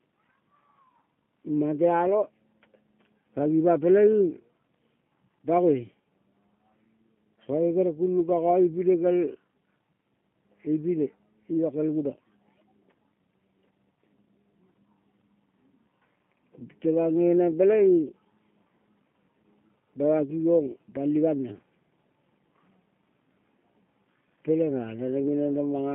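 From start to finish the speech has passed through a G.729 codec, which rebuilds it from a vocal-tract model, pitch prediction and sparse pulses, as an 8 kbit/s stream would. The band spans only 150 Hz to 3.4 kHz, with plainly audible synthetic roughness.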